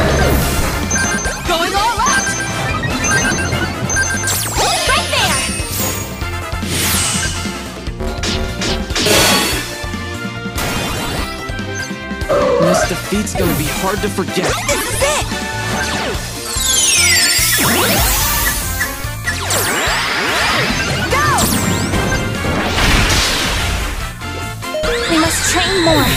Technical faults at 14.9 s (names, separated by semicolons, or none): DC step